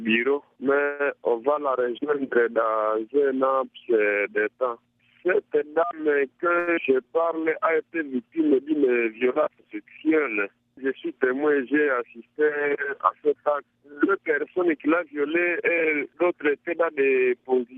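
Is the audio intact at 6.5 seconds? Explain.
No. A jitter buffer speed-up runs from 6.46 to 6.58 s. The receiver had built up more buffered audio than it targets, so it trimmed repeated short slices, each one or a few pitch periods long, to pull the delay back down. About 50 ms disappears this way. The sound plays at roughly 132% speed with its pitch unchanged, so the passage comes across as briefly hurried.

Right after, from 6.59 to 6.69 s, there is a short stall from a late packet. The next packet hadn't arrived when it was needed and the buffer ran dry, so the receiver stretched the last sound for 81 ms until it came in, then carried on from the same point. Nothing is lost, but that sound lingers too long with a faint buzz or dip, and the delay grows by 81 ms.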